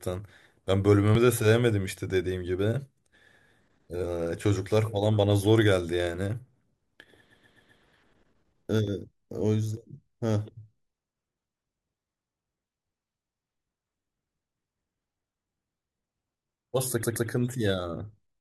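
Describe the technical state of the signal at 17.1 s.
At 17.1 s you're right in the middle of a repeated frames fault, running from about 17.02 to 17.28 s. A chunk of about 128 ms of the compressed stream got sent twice more, so the decoder plays that same slice of speech three times over. It comes across as a quick stutter. Those two extra plays add about 256 ms, and the repeated chunk is a run of six frames.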